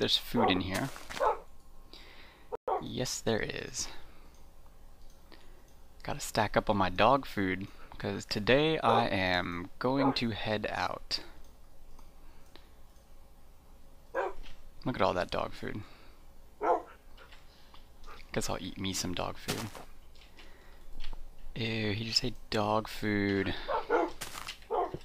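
At 2.55 s the audio halts in mid-flow and stays silent for about 123 ms, until 2.68 s. This is a playback stall, likely the player starving for data or its thread being blocked. The gap is a true silence rather than a click or a smeared dropout, and the sound then resumes.

From 2.68 to 3.50 s comes time-compressed catch-up. The player trims its backlog by cutting small pieces and cross-fading across the joins, so the audio runs about 1.15 times fast. Pitch stays normal, which separates this from a simple speed-up that would also raise pitch.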